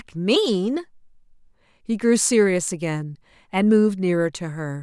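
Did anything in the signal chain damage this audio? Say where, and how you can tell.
No, nothing along the chain left a mark on this speech that I can hear, so there's nothing to trace back to any stage.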